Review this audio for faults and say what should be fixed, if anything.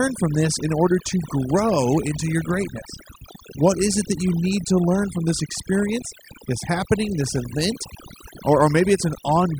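Overdone noise removal runs through the whole clip. The denoiser's reduction is set so strong that any frequency band sitting near its noise estimate is pushed down or shut off. The pauses collapse to near silence sprinkled with twinkling specks, and the softer parts of the speech are stripped too. Unlike a noise gate, which mutes everything at once, this works band by band, so the specks keep flickering even during gaps. To prevent it, back off the reduction amount and keep some natural background.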